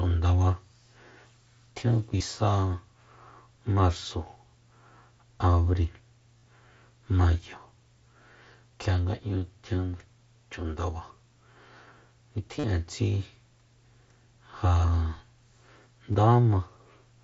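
Concealed Bluetooth headset packet loss at 2.13–2.20, 6.38–6.43, 12.59–12.64 and 16.12–16.15 s: lost packets were filled by repeating recent waveform, causing brief buzzy tones. On a waveform or spectrogram, these show as repeating cycles and flat, held harmonics.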